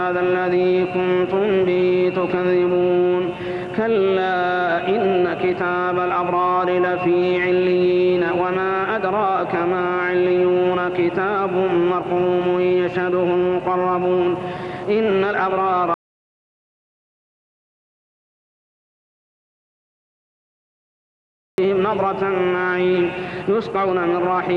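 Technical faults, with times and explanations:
15.94–21.58 s, audio dropout to silence: at 15.94 s the sound cuts off mid-flow and stays out for about 5.6 seconds, then comes back at 21.58 s just as abruptly. The gap is silent, not even room tone, so the input most likely disappeared, maybe a loose connection or a brief mute, while the recorder kept writing silence. Whatever happened in those seconds is simply gone.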